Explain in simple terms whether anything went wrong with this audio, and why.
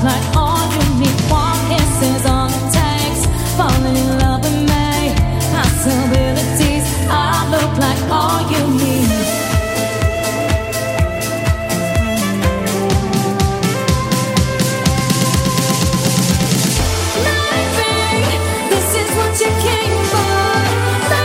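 Near the end, from 18.10 to 19.03 s, a quick burst of about ten ticks rattles over the sound at roughly ten per second, unevenly spaced. This train of clicks is likely from electrical interference or a faulty connection injecting repeated pulses.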